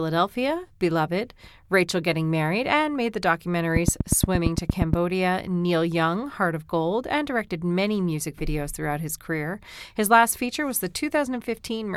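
Speech clip with a train of clicks from 3.76 to 4.94 s, after "and made the". Around ten regular clicks, 8.55 per second, rise well above the voice. Likely equipment interference.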